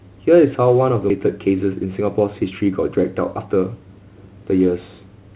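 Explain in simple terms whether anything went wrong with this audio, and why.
Two things go wrong, both early in this speech clip.

At about 1.1 seconds there is a skip ahead: roughly seven-tenths of a second of audio is thrown away and playback jumps straight to later sound. Unlike a dropout, there is no silent gap or filler, just an abrupt join.

Right after, from 1.26 to 3.95 seconds, a jitter buffer speed-up makes the speech run about 6% fast as tiny slices are trimmed out, around a fifth of a second in total. Unlike a pitch shift, the voice pitch stays the same, so it sounds hurried, not higher. The call path itself uses G.711 mu-law, which leaves nothing above 4 kHz.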